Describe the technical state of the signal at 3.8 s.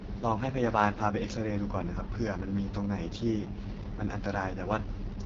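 At 3.8 s, as across the whole clip, the speech carries AMR wideband (HD Voice) codec damage: heavy, raspy roughness from a pulse-driven vocal tract model, consistent with the lowest 6.6 kbit/s mode. Nothing sounds above 7.5 kHz, and hissy, noise-filled top end near 6.4 to 7 kHz distinguishes it from narrowband telephone coding.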